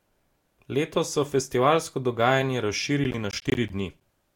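Around 3.04 s, just after "so festivalsko dogajanje", the processor falls behind and misses a run of buffer deadlines, roughly fifteen of them, each around 10 ms long. This is processor overload crackle in a speech recording: every missed buffer drops out as a hard-edged slice of silence, and together they tear the sound into a gritty, crackling stutter that lasts until about 4.01 s, when the load eases and playback runs cleanly again.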